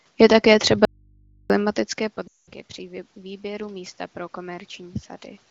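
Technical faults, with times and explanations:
0.85–1.50 s, audio dropout to a faint residue: the speech cuts off abruptly and for about 0.65 s only mains hum remains, roughly 35 dB below the speech level, before the sound returns just as suddenly. The likely cause is a brief loss of the wanted signal while the input stayed live and picked up hum. On the waveform this is a near-flat stretch with sheer edges. A spectrogram shows the speech energy vanishing, leaving thin horizontal lines at the hum frequency and its harmonics.
2.27–2.50 s, lost AMR speech frames: for about 0.2 s the decoder had no good speech data. It kept repeating the last valid pitch and vocal-tract settings at falling gain, so the sound drops to near silence within two frames before speech resumes, briefly weak and rough. The length fits a run of about ten 20 ms frames. The waveform shows a repetitive, periodic shape that shrinks in amplitude. 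The spectrogram shows a frozen harmonic pattern that fades rather than evolving.
2.75–5.07 s, automatic gain rising: the input level fell by about 17 dB, and the automatic gain control answered by raising its gain slowly, by about 3 dB over more than two seconds. Voice and background room noise swell together, gently and steadily, with no sudden step. On the waveform the envelope climbs gradually across this stretch. On a spectrogram both the speech and the noise floor brighten uniformly at all frequencies, up to the 7 kHz top of the wideband channel.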